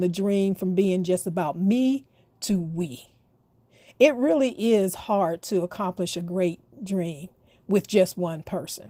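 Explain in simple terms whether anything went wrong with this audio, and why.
Nothing went wrong: the speech passed through Opus voice compression at a setting that keeps the full frequency range and leaves only light traces, and no fault shows up anywhere in the recording.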